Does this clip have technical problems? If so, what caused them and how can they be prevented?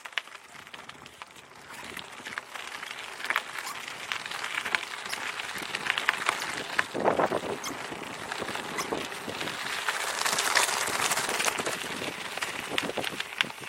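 Yes. At 9.31 s there is a brief glitch, caused by damaged data in a compressed stream. Some bytes of the encoded file were lost or overwritten, so the decoder misread the frames there and lost sync until it found the next valid frame header. Prevent it by using checksummed transfers and error-checked storage for compressed files.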